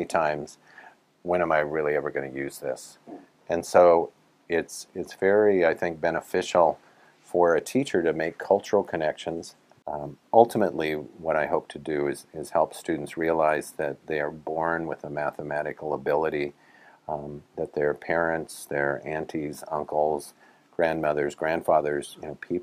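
Nothing in the signal departs from normal behaviour at any point; level, continuity and timing hold steady throughout the audio.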